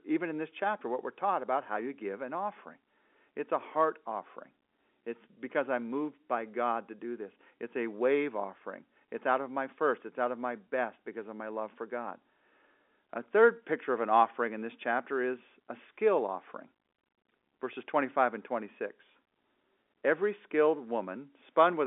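No faults on this speech: it is ordinary G.711 mu-law telephone audio at 64 kbps, band-limited to roughly 300 Hz–3.5 kHz with nothing above 3.8 kHz, and any coding noise stays faint.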